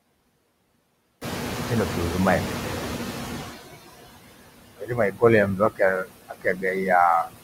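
Noise suppressor artifacts run through the whole clip. The suppressor pulls down whatever bands it judges to be steady noise by about 19 dB, frame by frame, so the background sinks between words and swells beneath them.

Noise suppressor catching up, from 1.21 to 3.57 s: the room noise jumps by about 17 dB at roughly 1 s, and the suppressor's noise estimate trails it. For about 2.36 s the louder background gets only about 14 dB of reduction and sounds exposed. It then settles lower once the estimate adapts.

Speech cut by the noise suppressor at 4.75 to 5.23 s, 5.56 to 5.81 s and 6.29 to 6.64 s: the suppressor mistakes parts of the speech for noise. It turns them down by up to about 21 dB in the first span and about 18 dB in the other two. The affected stretches are roughly a third, a tenth and a fifth of a second long, and soft sounds and word endings come out swallowed and faint.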